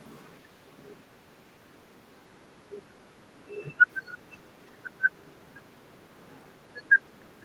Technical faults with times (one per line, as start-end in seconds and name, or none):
4.05-4.17 echo leak